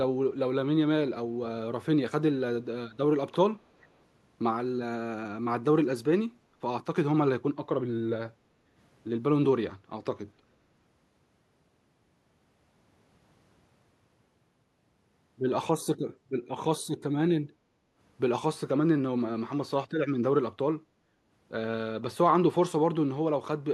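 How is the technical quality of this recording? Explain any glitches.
The recording has two kinds of glitch: one brief echo and three short dips in the background.

Echo leak, 3.81 to 3.88 s: a faint delayed copy of the speech, lagging about 0.4 s behind, appears for a moment. The likely cause is a far end on a loudspeaker whose echo canceller failed to strip everything its microphone caught, so a scrap was returned down the line. It sits very far below the speech.

Background gated by the echo canceller, at 8.32 to 8.76 s, 16.17 to 16.29 s and 17.52 to 17.97 s: while the loudspeaker was active, the canceller clamped the microphone down hard, then released it. The room tone sags by about 7 to 8 dB each time, for roughly 0.4 s at 8.3 s, half a second at 17.5 s and only about a tenth of a second at 16.2 s. It is heard as brief holes in the ambience.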